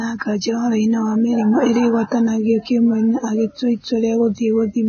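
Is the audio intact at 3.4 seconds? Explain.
No, not really. At 3.4 s, like the whole clip, the speech carries heavy damage that sounds like Vorbis compression, likely at a rate around 16 kbps: nothing above about 6.5 kHz, and the treble is quantised so coarsely it turns to grainy hiss.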